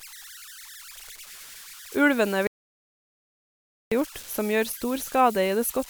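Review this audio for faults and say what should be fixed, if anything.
Converter idle tones run through the whole recording: a whistle near 1.5 kHz, about 19 dB below the speech, most exposed in pauses and giving a grainy edge to quieter passages. An undithered delta-sigma converter fed a very small input settles into repeating bit patterns, and those cycles come out as audible tones. On a spectrogram this shows as a thin horizontal line around 1.5 kHz. Enabling dither on the converter, or using an interface that applies it, breaks up the patterns and prevents this.

An audio dropout to silence cuts the speech off at 2.47 s, and it returns mid-flow at 3.92 s, so about 1.45 s of material is missing. The gap is silence with no room tone. The likely cause is a lost input, such as a loose connection, a failed link or an accidental mute, while the recorder kept writing silence. The waveform shows a flat line with abrupt edges, and the spectrogram shows a blank vertical band. 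Securing cables and links and monitoring input levels during capture would prevent it.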